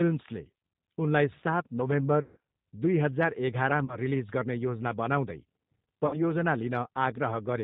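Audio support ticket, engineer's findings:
Speech clip with G.729 codec coding throughout. Symptom: slightly rough, synthetic speech, plainly audible, consistent with G.729A at 8 kbit/s. Component: VoIP speech codec. Mechanism: speech rebuilt from a vocal tract filter, pitch predictor and sparse pulses per 10 ms frame. Spectrogram: hard ceiling at 4 kHz, empty above. Waveform: envelope intact, fine detail smoothed.

VoIP packet loss concealed by the speech codec, 2.22–2.37 s, right after "उनलाई सात". Symptom: sound stretched into a buzzy tone that fades. About 150 ms lost, which points to roughly five packets. Mechanism: decoder extrapolates its last pitch and filter, cutting gain frame by frame. Spectrogram: frozen harmonic bands dimming. Waveform: repeating periodic cycles with decaying amplitude.

3.85–3.97 s, just before "रिलिज गर्ने योजना बनाउँदै". About 30 ms lost, fitting a single packet. 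Short buzzy smear, then weak, distorted onset while decoder state recovers.

6.07–6.22 s, about 60 ms lost, fitting two packets. Same pattern: flat repeated harmonics fading, slow recovery.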